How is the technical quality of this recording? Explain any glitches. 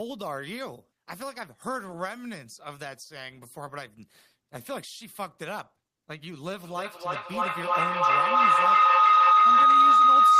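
The recording has one serious fault, a feedback howl that takes over the end of the clip. It begins at 6.64 s and runs to the end. A microphone is picking up a loudspeaker carrying the same call, so each pass around the loop comes back louder. The repeats narrow to a single favoured pitch near 1.5 kHz. The loop comes around roughly every third of a second, and the tone peaks about 17 dB above the speech.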